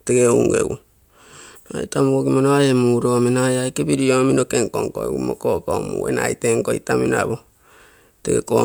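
No dropouts, clicks, distortion or timing problems turn up anywhere in the recording.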